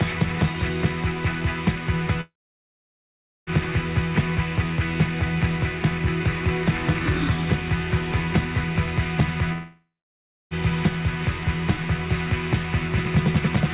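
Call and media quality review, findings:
Fading buzz after the last sound, then silence, resuming with content lost: 2.21–3.50 s (about 1.2 s silent), 9.53–10.54 s (about 0.65 s silent). Likely long network dropout. Receiver concealment stretches the last G.711 A-law frame, 4 kHz band-limited, then mutes.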